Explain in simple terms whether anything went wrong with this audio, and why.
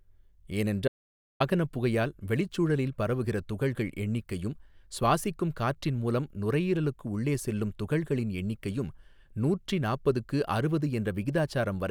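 The input was likely lost briefly, causing an audio dropout to silence. From 0.88 to 1.40 s the speech cuts to total silence, then resumes at "புகையால் வெளிச்சூழலில் பரவுகிற துகள்கள்".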